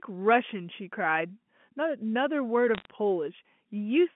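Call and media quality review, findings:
Bit errors on the digital phone line, 2.75 to 2.85 s: flipped bits on the G.711 mu-law path, at a rate well under one percent, corrupt single samples. Sign and high-order hits come through as sharp ticks and brief crackle over unchanged speech, within the 150 to 3400 Hz telephone band.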